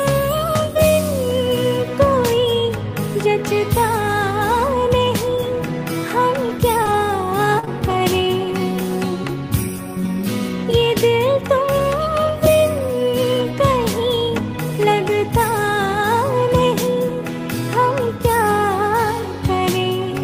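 Between 6.83 and 8.35 s, brief ticks and smeared hiccups appear, the longest around 40 ms. These are scattered short gaps: packets went missing in about three gaps and the receiver covered each by extending the preceding sound. At 11.79, 12.27, 12.79 and 13.41 s, 20 ms moments turn rougher and noisier without any break. Each is a lost packet rebuilt from error correction, using the lower-quality copy carried in the following packet.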